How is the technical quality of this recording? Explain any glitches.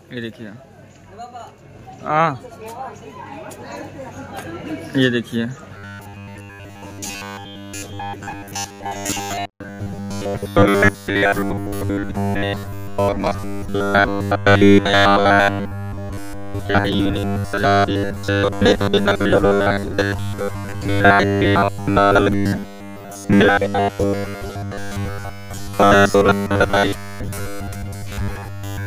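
The recording is degraded from 5.77 s to the end at 28.86 s by robotic sound from repeated short buffers. Audio is likely arriving too seldom, so playback keeps looping the last fragment, about 10 ms, and skips real material for most of that stretch. The looping imposes a rigid 100 Hz buzz, a metallic tone that only loosely tracks the underlying sound. On a spectrogram this shows as evenly spaced harmonics of 100 Hz, and the waveform shows near-identical 10 ms cycles repeating.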